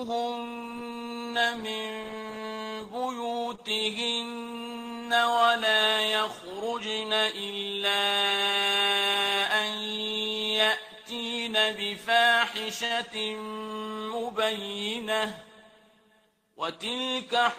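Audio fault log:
3.55 to 3.61 s, short stall from a late packet: a packet turned up late, the jitter buffer ran dry, and the receiver stretched the last bit of sound for about 24 ms before carrying on exactly where it left off. Nothing is lost, but that moment hangs a touch too long with a slight buzz or dip.
12.85 to 12.93 s, short stall from a late packet: same thing, a bit longer. The hold runs about 47 ms. From here on everything plays that much later.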